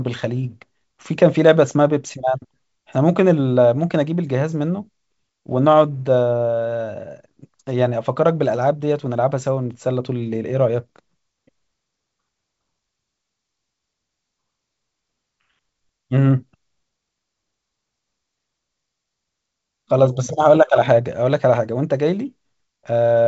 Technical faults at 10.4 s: none

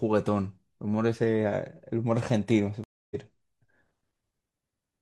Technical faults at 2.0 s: none

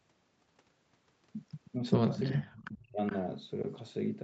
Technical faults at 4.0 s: none

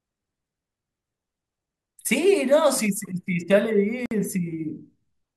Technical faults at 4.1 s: gap at a join of encoded pieces

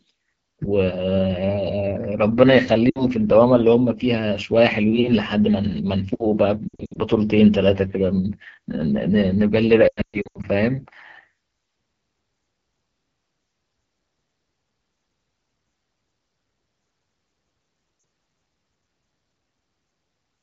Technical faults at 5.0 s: AMR wideband (HD Voice) codec

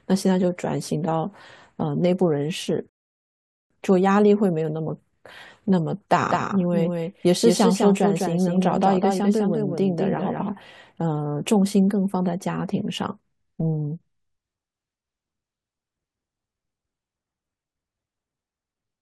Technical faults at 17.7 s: none

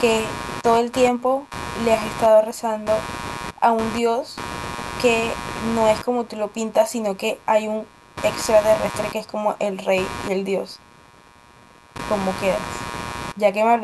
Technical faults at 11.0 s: computer activity noise

